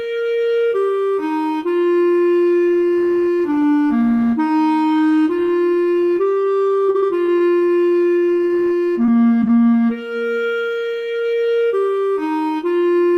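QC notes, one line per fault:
6.63–8.51 s and 9.05–9.75 s, repeated packet loss (robotic sound): a quick string of short dropouts, longest around 41 ms. Each hole gets papered over by stretching the last bit of sound, so it turns choppy, with slivers missing.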